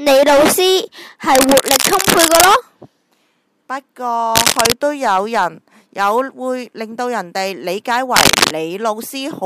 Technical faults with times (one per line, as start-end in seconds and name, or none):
1.35-2.48 cable scratch noise
4.35-4.74 cable scratch noise
8.16-8.52 cable scratch noise